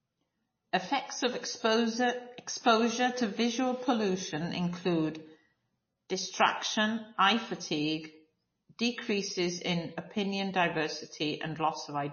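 MP3 compression, likely the cause, runs throughout: nothing survives above 6.6 kHz, and the speech sounds watery and swirly, with clearly audible chirping on sibilants. That fits a starved encoder near 25 kbps cutting the treble and dropping weak frequency lines frame by frame.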